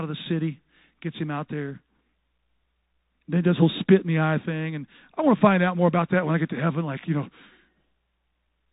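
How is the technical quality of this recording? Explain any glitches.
Quality is limited the whole way through by a Bluetooth CVSD headset codec, and the damage is plainly audible. The speech has no content above about 3.8 kHz. CVSD sends just one bit per sample saying up or down, with an adapting step size, which fits a 64 kbps headset link. Where the waveform jumps faster than the step can follow, it smears, so s sounds come out scratchy. A grainy hiss also sits under the speech.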